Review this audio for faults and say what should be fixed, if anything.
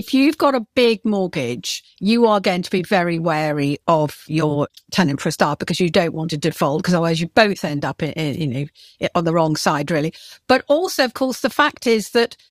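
Nothing here needs fixing; the speech shows no audible faults.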